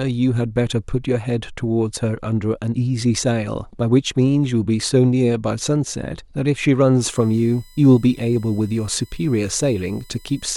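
From 7.01 s to the end of the clip, a thin, steady whine of fixed pitch sits under the speech, about 30 dB below it, built on 1 kHz with its strongest component at 4 kHz. This is USB whine. The USB bus draws current in bursts every 1 ms frame, and that pulsing leaks into the audio through shared power or ground, giving a tone at 1 kHz and its multiples.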